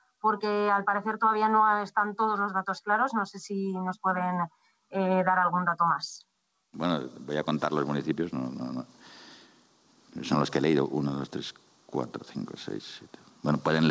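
Throughout the clip, the input gain is likely set too high for the microphone, so a fast limiter or compressor keeps clamping down on every loud sound and then letting go. The result is gain pumping: the level swings by around 5 dB, and the dynamics sound flattened and squashed. The call codec's band limit, with nothing above 8 kHz, fits G.722 wideband coding.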